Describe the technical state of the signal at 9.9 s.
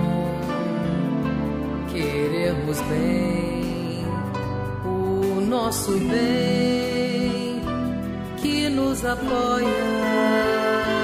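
At 9.9 s the signal is intact, with no dropout, distortion, glitch or other audible fault at that moment.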